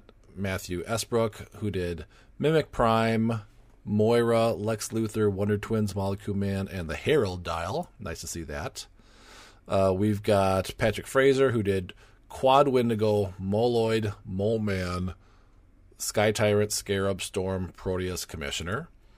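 From 14.53 to 15.89 s the speech abruptly slows by 5.9% and drops about 105 cents, then snaps back: a drift correction step, likely from clock-matching software refilling its buffer. On a spectrogram, harmonics step down together, then jump back up.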